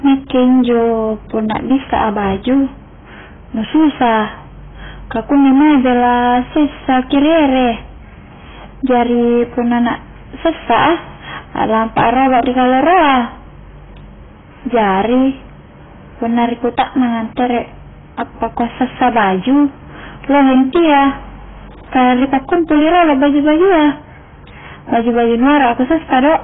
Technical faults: hard clipping; AAC compression

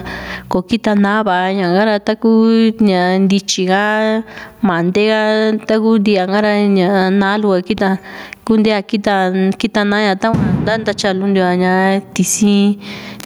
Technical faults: gain pumping

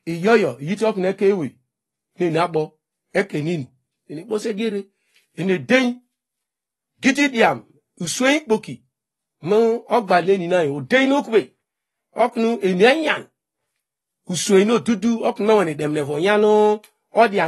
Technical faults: AAC compression

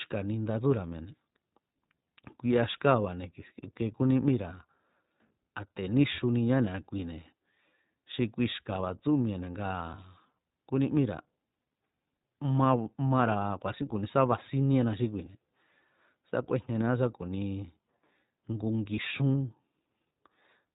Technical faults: iLBC codec; lost iLBC frames

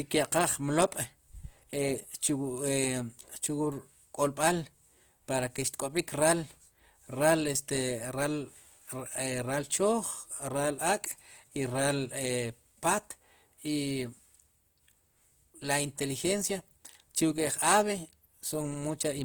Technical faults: Opus compression

